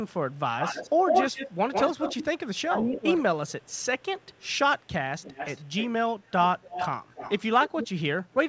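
A far-end echo canceller likely let loudspeaker pickup through, producing echo leak from 0.08 to 2.25 s: a copy of the talker about 149 ms late, roughly as loud as the speech itself, heard as a strong doubling. Between 2.48 and 3.04 s, speech is suppressed in double talk as the canceller likely turns everything down while both sides speak, cutting the talker by as much as about 20 dB for around half a second. Faint echo returns at the same 149 ms delay from 3.47 to 4.48 s, far below the speech, and as a brief trace near 4.8 s. From 5.2 to 5.89 s and 6.29 to 7.88 s the delay lengthens to 278 ms and the echo grows more audible, roughly 10 to 15 dB under the speech, a distinct trailing repeat. Across the call, nothing above 8 kHz survives, which fits G.722 at 64 kbps.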